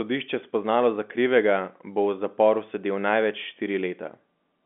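Nothing's wrong with this short stretch of speech; it just carries the usual narrow sound of an ordinary phone line, with no content above about 3.7 kHz, which is what a 64 kbps G.711 mu-law connection sounds like.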